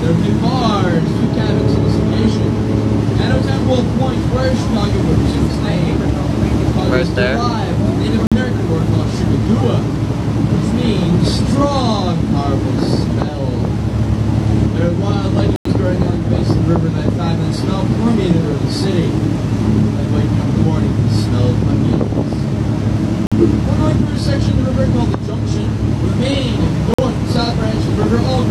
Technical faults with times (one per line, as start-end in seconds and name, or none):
8.27-8.37 corrupt frame muted
15.56-15.71 corrupt frame muted
23.27-23.44 corrupt frame muted
26.94-27.03 corrupt frame muted